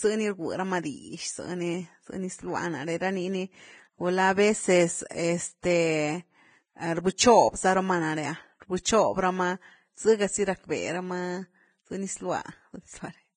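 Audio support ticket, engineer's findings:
Hissy, grainy speech throughout, nothing above 9.7 kHz, treble turned to noise. Likely heavy Vorbis compression at a low bitrate, around 22 kbps; coarse residue quantisation.

Pre-echo: short hiss smearing attacks at 5.09–5.11, 5.61–5.64, 8.60–8.62, 8.83–8.85, 12.42–12.45 s, 20–32 ms each. The codec's block-wide quantisation noise fills the quiet moment before each onset.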